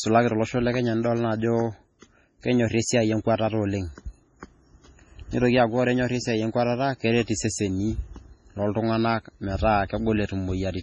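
Throughout the speech, the treble stops at 10.3 kHz. The sound is watery and swirly. The s sounds chirp and attacks smear. This is likely heavy MP3 compression. The encoder ran short of bits, which fits a bitrate near 24 kbps.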